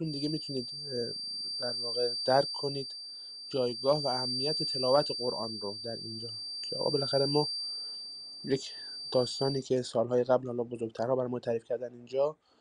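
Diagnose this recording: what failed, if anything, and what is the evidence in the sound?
The failure is at the analogue end, most likely an acoustic loop from loudspeaker back into the microphone running with its gain just under the point where it would run away, producing a feedback whistle. A thin, steady tone at 4.7 kHz sits a few dB beneath the sound from the very start to 9.66 s, swelling and fading slowly in level but never growing, which is what a loop hovering right at marginal stability does to one resonant frequency.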